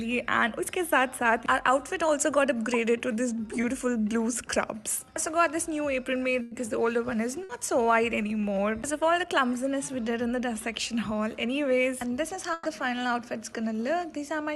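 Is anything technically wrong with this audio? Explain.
Yes. There are dropouts from packet loss on a call connection, where the sound shows the band-limiting of a call codec with nothing above about 12 kHz.

The first is a short concealed packet loss from 3.61 to 3.65 s. About 20 ms of audio never reached the decoder in time. The receiver carried the previous sound forward to cover the gap, then blended back into the real signal. It is heard as a brief smear or wobble, and a very short sound there can be lost.

Then there are three bursts of packet loss. They fall at 6.41 to 6.53 s, 7.43 to 7.51 s, and 12.53 to 12.67 s. Around 100 ms, 60 ms and 120 ms of audio went missing. Each time, the receiver stretched the last sound and let it fade. It becomes a held buzz or a dying hiss. The audio then jumps ahead, and whatever fell in the gap is gone.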